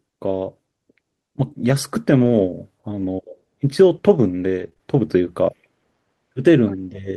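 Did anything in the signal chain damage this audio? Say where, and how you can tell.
Yes, and it's all network-side. Around 2.17 to 2.35 s and again at 2.97 to 3.03 s there's lost packet recovery via error correction: no dropout, just about 100 ms and then 40 ms of rougher, noisier sound, where the decoder played the low-bitrate backup copy carried in the following packet.

Then from 4.61 to 4.81 s you get repeated packet loss with that robotic quality. Three holes in quick succession, the longest 22 ms, each patched by stretching the last sound forward. That's roughly 30% of the stretch concealed, so it comes out choppy and robotic.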